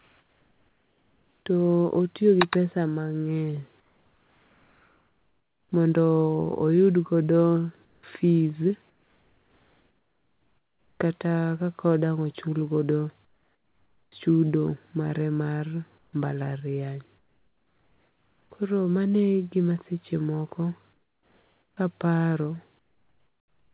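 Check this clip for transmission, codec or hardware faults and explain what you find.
The pauses between speech lose their real background, and the audio is band-limited to 4 kHz, which fits a narrowband G.711 call path.

Comfort noise in place of the background occurs at 0.0–1.46 s, 3.8–5.72 s, 7.85–11.0 s, 13.25–14.12 s, 15.98–18.5 s and 20.93–23.73 s. In each pause the natural background gives way to a flat, textureless hiss, where measured about 4, 5 and 8 dB quieter. This is likely discontinuous transmission: the sender goes silent when no speech is detected, and the receiver synthesises noise to fill the gap.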